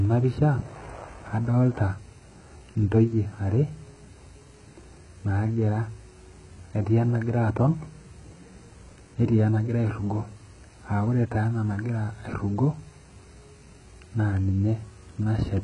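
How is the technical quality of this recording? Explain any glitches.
Quality is poor throughout the whole speech clip, with heavy compression damage from start to finish. It's likely HE-AAC compression: the top end sounds synthesized rather than real, because the treble is copied up from lower bands, so s sounds come out gritty and lispy. Nothing survives above 11 kHz, and the damage points to a very low bitrate, around 12 kbps.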